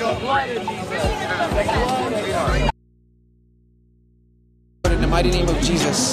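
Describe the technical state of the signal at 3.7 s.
At 3.7 s the signal is likely lost upstream while the input stays open, an audio dropout to a faint residue lasting from 2.71 to 4.84 s, about 2.1 s. The sound cuts out abruptly, leaving only mains hum roughly 35 dB below the normal level.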